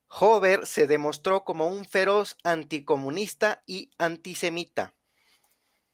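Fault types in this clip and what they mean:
No faults can be heard anywhere in this recording.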